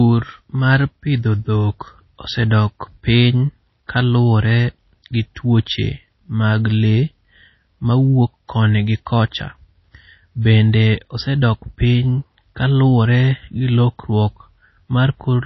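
From start to finish the speech has a hard ceiling at 5.8 kHz and plainly audible codec damage, likely MP3 compression at a low bitrate that fits about 24 kbps. Starved of bits, the encoder chops the treble and lets weak frequency lines drop in and out between frames.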